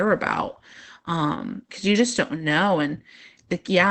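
Opus voice compression throughout: the speech sounds plainly muffled, hoarse and slightly robotic, consistent with SILK wideband coding near 12 kbps and its coarse excitation.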